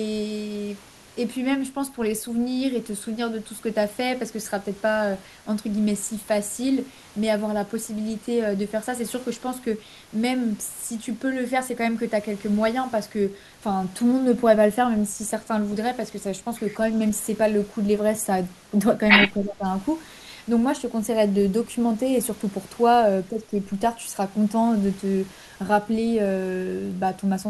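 From 19.36 to 19.65 s the speech dips sharply, by roughly 15 dB, for about a third of a second. This is speech suppressed in double talk, likely an echo canceller unable to separate the local talker from the loudspeaker echo and attenuating both. The waveform narrows abruptly, and the spectrogram fades.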